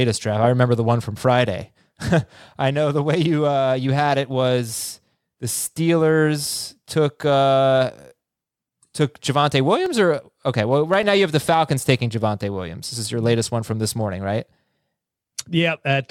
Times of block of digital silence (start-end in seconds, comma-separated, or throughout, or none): 9.86, 11.03